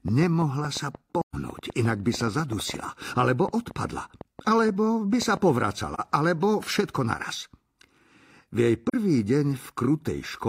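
AAC frame loss with muting occurs at 1.20 s, 5.94 s and 8.89 s. At 1.20 s the speech drops out for about 128 ms, which fits three consecutive frames. The two later gaps are about 43 ms each, consistent with a single frame. The decoder zeroed the missing spectra, and the overlapping transform windows taper the sound down into each silence and back up after it, leaving a soft-edged hole at 1.20 s and brief dips at the later two.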